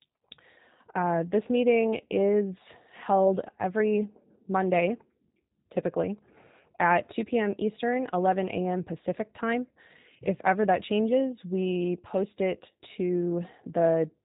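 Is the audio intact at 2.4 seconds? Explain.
No. At 2.4 seconds the speech is carrying G.729 codec damage, and it runs through the whole clip. The sound is rebuilt from a vocal tract filter plus a few pulses per frame at what sounds like 8 kbit/s. Nothing gets through above 3.8 kHz, so the speech comes out dull, a bit rough and synthetic.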